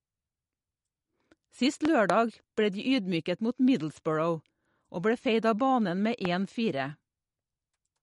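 Throughout, the speech has a watery, swirly quality and nothing above 11.2 kHz, a flat ceiling on a spectrogram, likely from MP3 compression at a rate that fits about 48 kbps. A loud pop occurs twice between 1.85 and 2.12 s and once at 6.25 to 6.27 s. Each is a sharp click about 15 dB above the speech, likely from an electrical step or pulse, and shows as a tall waveform spike and a vertical line up to 11.2 kHz on a spectrogram.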